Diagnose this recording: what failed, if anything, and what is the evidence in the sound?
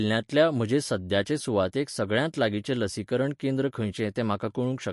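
Codec stage, likely MP3 compression. The speech stops at 11.3 kHz throughout. Weak frequency lines flicker between frames, causing plainly audible swirl, consistent with 48 kbps.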